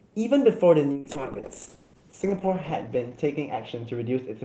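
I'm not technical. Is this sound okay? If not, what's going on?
No. From 0.92 s to the end, the speech turns rough and muffled. That's a call bitrate drop: the connection weakened, so the call squeezed the sound into far less data.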